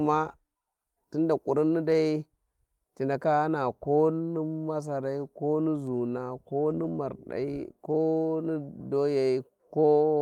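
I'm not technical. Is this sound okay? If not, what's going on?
No. Some small pieces of the speech got lost in transmission, and the system filled each gap with a rough backup copy sent alongside, a lost packet rebuilt from error correction. The speech never drops out, but briefly sounds rougher and noisier at 6.69, 6.83 to 6.95, 6.93, 6.95, 7.91 to 7.93, and 8.01 to 8.03 seconds.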